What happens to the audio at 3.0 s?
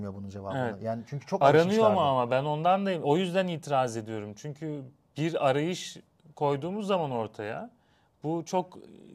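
At 3.03 s the speech is broken by damaged data in the compressed stream, heard as a very brief blip. Corrupted bytes there leave the decoder unable to read the affected frame, so it loses sync and searches for the next valid frame header.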